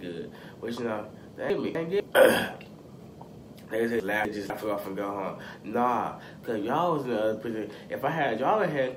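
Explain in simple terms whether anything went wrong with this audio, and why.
Two spots, 1.5 to 2.0 s and 4.0 to 4.5 s, have chunks out of order: a quarter-second piece arrived late and plays after the piece that should follow it. Nothing is missing, but each spot sounds jumbled, with three abrupt joins.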